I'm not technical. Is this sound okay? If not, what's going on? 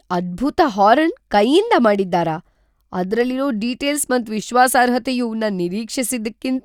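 Yes, this one's fine: I didn't hear any glitches, dropouts or other technical problems anywhere in it.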